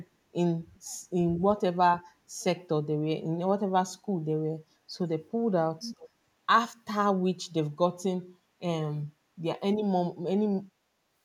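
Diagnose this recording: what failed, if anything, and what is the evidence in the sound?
Speech suppressed in double talk, in call processing. The level dips by about 15 to 20 dB for brief stretches, each roughly 70 to 200 ms, at 0.54–0.8 s, 1.18–1.24 s, 7.95–8.02 s, 9.04–9.26 s and 10.96–11.15 s. The likely cause is an echo canceller that could not separate the near talker from loudspeaker echo while both sides spoke, so it turned everything down. Packet loss would cut the sound to silence or fill it with smeared repeats. Here the sound only ducks partway and then recovers. The final dip is also separate from the gradual fade-out from about 10.5 to 10.7 s.

Echo leak, also in call processing. A delayed copy of the talker comes back about 0.4 s (401 ms) after the original. It is about 40 dB down at 0.75–0.79 s, and only about 15 dB below the speech at 5.82–6.09 s. This likely comes from a loudspeaker whose canceller let part of the microphone pickup through. 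Room reverberation would be a diffuse tail that blends into the speech. Here the repeat is a distinct copy at a fixed lag.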